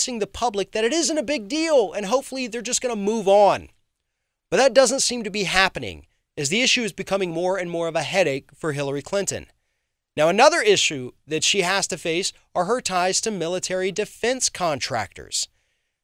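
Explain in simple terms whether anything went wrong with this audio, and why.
No faults can be heard.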